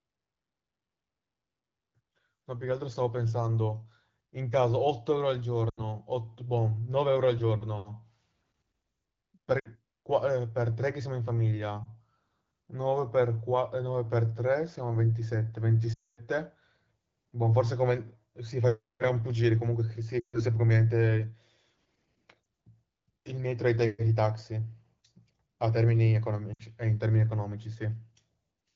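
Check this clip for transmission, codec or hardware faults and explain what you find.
The speech has seven dropouts from lost AMR speech frames, at 5.69–5.83 s, 9.60–9.68 s, 11.84–11.88 s, 15.93–16.21 s, 20.19–20.41 s, 22.43–22.45 s and 26.53–26.62 s. Corrupted frames were discarded, and the decoder repeated its last good settings with falling gain. The single-frame gaps give a brief dip or warble. The 240 ms gap at 15.93 s drops to near silence within two frames. The underlying wideband sound fits a 12.65 kbit/s AMR-WB stream.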